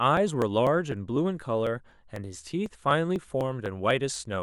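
Periodic USB or driver dropouts run from 0.17 to 4.16 s, repeating every 0.25 s: roughly a millisecond of speech is skipped each time, heard as regular ticks.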